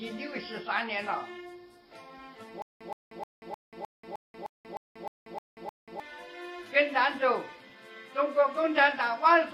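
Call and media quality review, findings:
Stutter with silent gaps, 2.62–6.00 s: a 122 ms fragment repeats eleven times at a 307 ms period, with 185 ms of digital silence between. Likely a player or stream stall replaying the last buffer on each retry. Intervening audio is lost.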